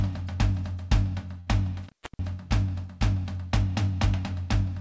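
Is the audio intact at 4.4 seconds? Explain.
Yes, the music is intact at 4.4 seconds, with no dropout or glitch at that moment, only the normal sound of the call path, whose G.722 coding leaves nothing above 8 kHz.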